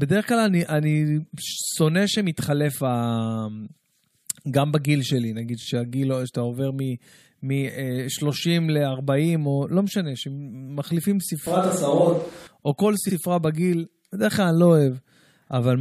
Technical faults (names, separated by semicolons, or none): repeated frames; switch to a distant microphone